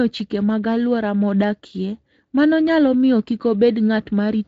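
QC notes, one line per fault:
Nothing to flag on this speech clip; it's been through a Speex codec at a fairly generous setting, and no faults turn up anywhere along the way.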